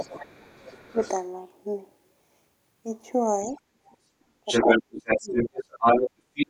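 A speech recording where the echo canceller likely failed to fully remove the far end's loudspeaker sound from the microphone, so the other side's voice leaks through. It is faint at 0.0 to 1.12 s (about 20 dB down), 3.47 to 3.54 s and 3.85 to 3.94 s, then rises above the talker from 4.46 s to the end. During double talk the canceller likely also pulled down the talker's own speech. The speech is suppressed briefly at 0.91 to 1.02 s, mildly at 3.46 to 3.58 s, and sharply near 3.95 s. The worst stretch is 4.62 to 5.59 s, where the speech drops by up to about 30 dB.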